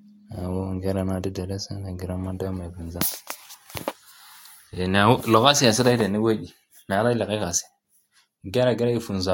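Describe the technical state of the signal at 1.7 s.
At 1.7 s the speech signal is intact, with no audible fault at that moment.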